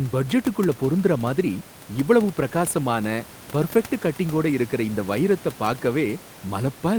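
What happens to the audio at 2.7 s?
Nothing goes wrong at 2.7 s: the speech carries on intact through that moment, with only the usual room noise sitting about 22 dB beneath it.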